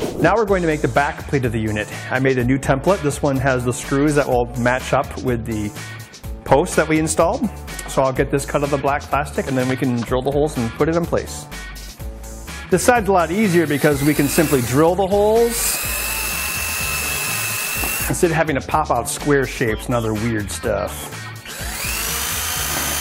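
No technical faults can be heard anywhere here.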